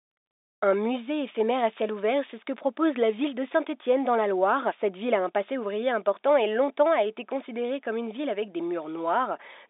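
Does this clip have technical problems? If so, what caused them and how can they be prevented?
No technical problems: the speech sits in the 300 Hz to 3.7 kHz telephone band, as expected of a 64 kbps G.711 mu-law line working normally.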